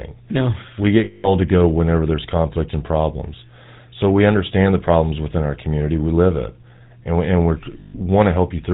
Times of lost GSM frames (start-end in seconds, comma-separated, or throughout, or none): 1.04-1.31, 7.80-7.95